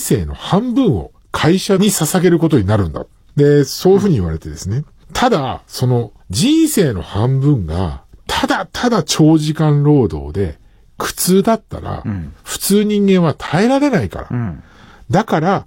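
At 13.47 s there's a gap between stream segments: a hard-edged hole of silence about 8 ms long. Two segment timestamps didn't quite meet, which fits 6-second segments, so the player padded the join with silence. Nothing's lost; it just drops out briefly.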